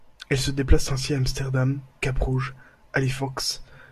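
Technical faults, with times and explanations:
No technical faults are audible in this speech recording.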